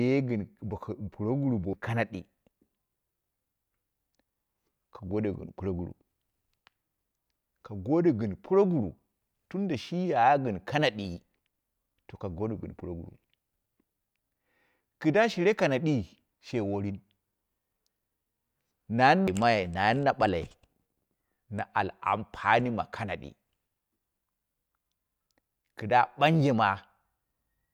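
At 1.73 s and again at 19.27 s there's a CD skip: the laser jumps to another turn of the spiral, giving a tick, a few-millisecond mute, and a sudden jump in the speech.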